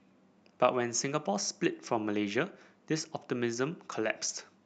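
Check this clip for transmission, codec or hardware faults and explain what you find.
No transmission, codec or hardware faults are audible here.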